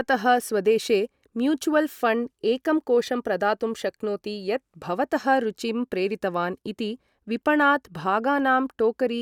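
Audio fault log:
No technical faults can be heard in this speech recording, and the signal remains intact at every point.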